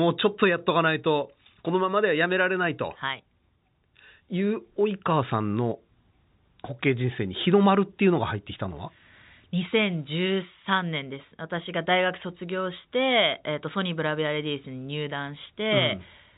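No technical faults can be heard anywhere in the speech. The G.711 telephone coding is working as expected, with the sound band-limited so that nothing reaches above about 3.8 kHz, and any coding damage is at most faint.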